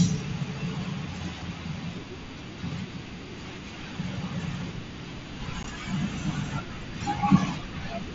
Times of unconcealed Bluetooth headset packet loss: 5.63

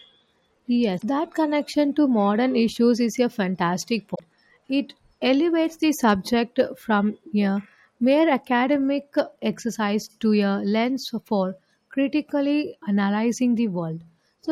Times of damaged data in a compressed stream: 0.95-1.03, 4.12-4.21

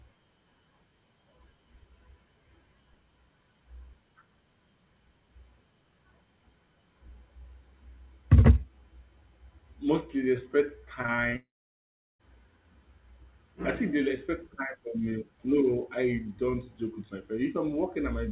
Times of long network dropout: 11.36-12.21

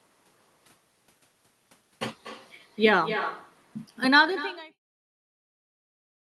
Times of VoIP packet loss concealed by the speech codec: none

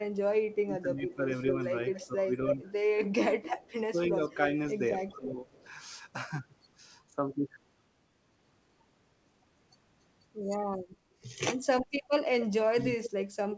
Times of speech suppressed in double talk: 0.27-1.27, 2.06-4.53, 5.16-5.46

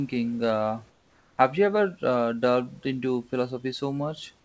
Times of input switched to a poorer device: none

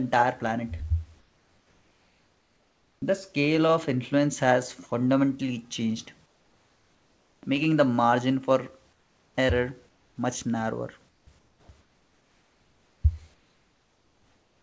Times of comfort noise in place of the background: 1.19-3.02, 6.26-7.43, 8.93-9.35, 9.89-10.16, 11.09-13.04, 13.34-14.62

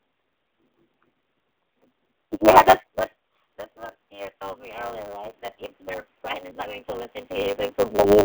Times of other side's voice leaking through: none

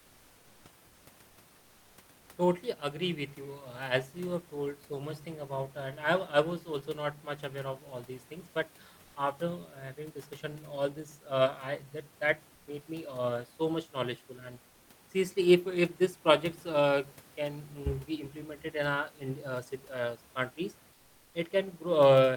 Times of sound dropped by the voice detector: 12.55-12.67

